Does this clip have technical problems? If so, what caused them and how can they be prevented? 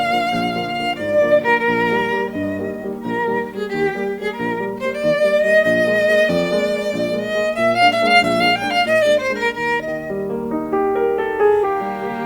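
No, this music recording carries through its whole duration without any dropout, distortion or other technical disruption in the signal.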